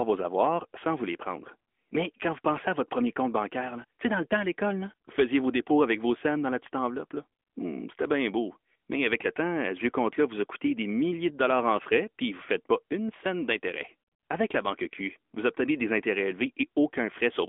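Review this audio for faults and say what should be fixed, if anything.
AMR narrowband mobile codec damage throughout: nothing above 3.6 kHz, a 250 Hz to 3.4 kHz line band, and buzzy synthetic texture fitting a 10.2 kbps mode, unlike a plain low-pass filter's clean dullness. Prevent it by recording locally or routing through a wideband path instead of a narrowband mobile call.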